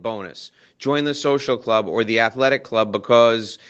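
Speech whose level climbs steadily from 0.05 s to 3.1 s, an automatic gain rising fault: the call's gain control judged the input too quiet and pushed it up by about 8 dB, so voice and background noise swell together. On a waveform the envelope widens gradually; on a spectrogram the whole band brightens over those three seconds. Energy stops near 8 kHz, which fits a wideband call codec such as Opus at a modest bitrate.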